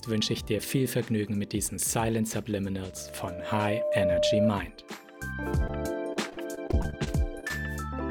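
A single tone at 602 Hz swells out of the audio from 2.83 s, climbing for about a second into a steady squeal that sits a few dB above the surrounding sound before it cuts off at 4.52 s. This is loudspeaker feedback squeal: a microphone was picking up the loudspeaker it was feeding, and at 602 Hz the loop gain rose above one, so that frequency fed on itself and grew until something stopped it. Between 5.67 and 5.71 s there is a brief smear where the sound seems to stretch and then slip back into place. That is short concealed packet loss. About 20 ms of audio never arrived in time, and the receiver papered over the hole by continuing the preceding sound before blending back into what actually arrived. From 6.13 to 7.52 s the audio turns choppy, with small pieces dropping out again and again, the longest gap about 35 ms. This is repeated packet loss, heard as a robotic sound. Around a dozen separate holes open up across this stretch, roughly a sixth of it in all. 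Each is patched by extending the last sound, and the next loss arrives before the audio can settle, giving a stuttering, choppy texture.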